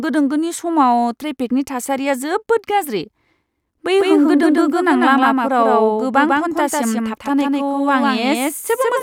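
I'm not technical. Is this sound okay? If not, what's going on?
No. A doubled audio track starts at 3.98 s and runs to the end: a second, equally loud copy of the speech trails about 150 ms behind, likely from a slower second recording path.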